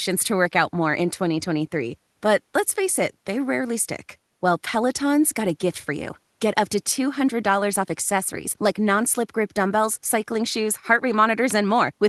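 No technical faults can be heard anywhere in the speech. It has come through a call codec and jitter buffer working as designed, and the traces of that path are the codec's usual coding noise and the top of the spectrum ending at 12 kHz.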